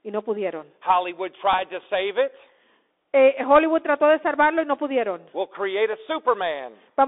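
Throughout the speech, the Bluetooth CVSD headset codec limits the sound to about 300 Hz to 3.6 kHz, which fits a 64 kbps CVSD link. Its one-bit slope tracking leaves a granular hiss and scratchy sibilants, unlike the smooth dullness of plain low-pass filtering.

At 1.53 s, a Bluetooth headset packet repeated gives a brief tick. About 7.5 ms of lost audio was filled by re-decoding the previous bits, which points to two 3.75 ms packets. This is too short to build the steady buzz of a longer run, and it is not a silent gap like a dropout.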